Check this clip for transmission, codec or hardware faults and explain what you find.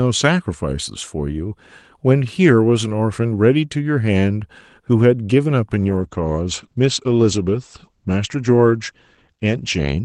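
One transmission fault is present: a call bitrate drop. It begins at 5.82 s and lasts to the end of the clip, with the lowest rate held for about 4.1 s. The call's bandwidth estimate fell, so the Opus encoder got far fewer bits. The sound fits a drop from around 40 kbps to around 12 kbps. Coding turns coarser, and the audio band narrows from 12 kHz to 8 kHz. The speech sounds duller, rougher and watery.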